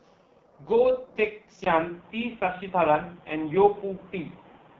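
From the start, the whole clip carries AMR wideband (HD Voice) codec damage. The speech sounds rough and raspy, with nothing above 7.1 kHz. The damage is heavy, which points to the lowest mode, around 6.6 kbit/s. The vocal tract model cannot track the speech closely at that rate.

At 1.64 s there is a brief gap of about 20 ms. From there to the end, the sound turns dull and boxy, and nothing remains above 3.8 kHz. The level shifts by about 5 dB. A new background noise sits roughly 30 dB below the speech. The likely cause is an input switched to a poorer device, such as a headset's call profile, with a narrower band and its own noise.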